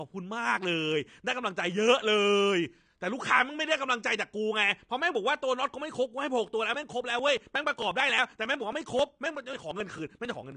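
Speech, dull and smeared from start to finish, with a fizzy, warbling edge on sibilants and nothing above 9.8 kHz. This plainly audible damage is likely AAC compression, with AAC-LC quantising its spectrum coarsely enough to suggest a low bitrate of around 32 kbps. From 6.74 s to 10.52 s, regular ticks sound every 0.09 s, several dozen in all, each where about 10 ms of audio is skipped. These are periodic USB or driver dropouts, where something stalls the audio path at a fixed interval.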